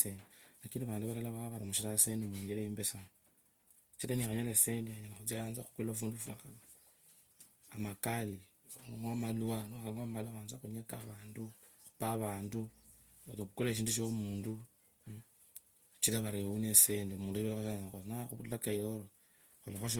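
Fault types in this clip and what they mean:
Opus compression: throughout, the speech has a grainy, rough, noise-tinged texture that likely comes from Opus in its music (CELT) mode at a low bitrate, around 24 kbps. Unlike MP3's swirling, bands sound filled rather than emptied, and content still reaches about 20.2 kHz.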